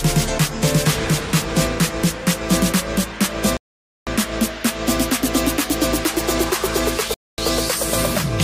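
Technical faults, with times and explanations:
3.57–4.07 s and 7.14–7.38 s, Bluetooth stall: the wireless link likely suffered interference that held up audio packets, so the headphones' small playback buffer emptied before the retransmitted data arrived. With nothing left to play, the output drops to silence for about 0.50 s and then about 0.24 s, and the sound picks up again once the delayed packets get through and the buffer refills.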